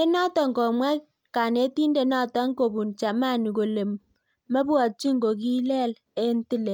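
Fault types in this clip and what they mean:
No technical faults are audible anywhere in the speech.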